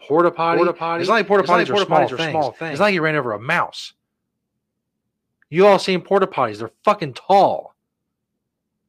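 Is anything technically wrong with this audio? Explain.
Yes. Doubled audio track, 0.52 to 2.90 s: a slower second capture path or a misaligned edit likely mixed the speech in twice, adding an abruptly starting and stopping dry copy about 0.4 s late and about 5 dB quieter.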